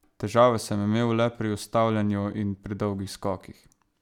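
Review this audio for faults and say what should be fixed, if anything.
No faults detected; nothing needs fixing.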